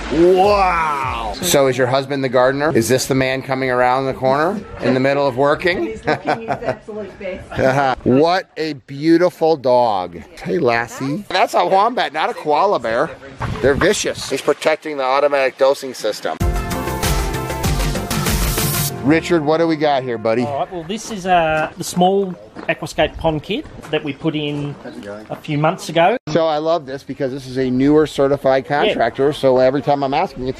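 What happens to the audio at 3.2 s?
Nothing goes wrong at 3.2 s: the audio there plays through without a dropout, click, glitch or other fault.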